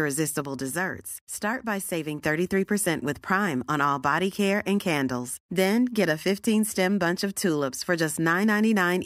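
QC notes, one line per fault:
0.46–2.18 s, sudden gain jump: speech and background noise drop together by about 4 dB, then return. Likely a gain change applied without a ramp.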